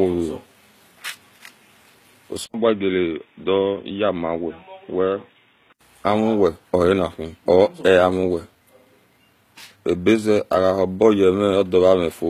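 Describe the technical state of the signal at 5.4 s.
At 5.4 s the speech sits inside a span from 2.46 to 5.81 s where the input appears switched to a poorer device. Nothing passes above 3.8 kHz, so the sound is dull and boxy, about 5 dB quieter, with a faint new noise floor well under the speech. An 80 ms gap marks the switch. A headset or secondary microphone is the likely cause.

Throughout, the treble above the crossover sounds synthetic and gritty, with nothing above 14.9 kHz and plainly audible codec damage. This is HE-AAC compression: spectral band replication rebuilds the highs from copied lower bands, which fits a bitrate near 20 kbps.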